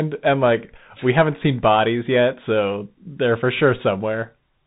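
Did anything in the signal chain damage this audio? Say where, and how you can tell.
Yes, at the codec stage: a Bluetooth CVSD headset codec throughout. Nothing passes above about 3.8 kHz, s sounds turn scratchy, and a granular hiss sits under the speech. That hiss and the step-overload roughness on loud high sounds set it apart from simple band-limiting, and fit 64 kbps one-bit delta coding.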